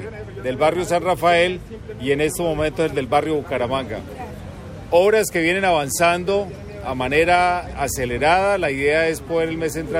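Nothing stood out as a technical problem on listening to the audio.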